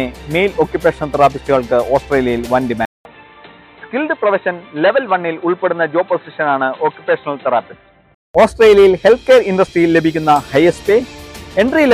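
An input switched to a poorer device, most likely, from 2.85 s to 8.35 s. At 2.85 s the sound breaks into a silence of about 200 ms, then returns dull and boxy, with nothing above about 4.1 kHz, a level around 5 dB lower, and faint new background noise roughly 45 dB below the signal. The input has likely moved to a narrower-band microphone or headset call profile with its own tone and noise. At 8.35 s the original fuller sound returns.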